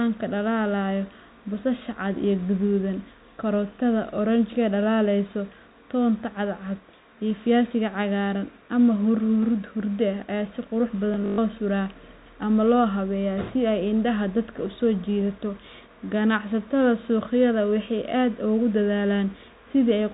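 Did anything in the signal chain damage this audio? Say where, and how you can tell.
Yes, at the network stage: packet loss with last packet repeated between 11.14 and 11.38 s. About 160 ms is lost across 240 ms, with a longest run of 120 ms. The repeated frames buzz around 50 Hz, which fits 20 ms packets.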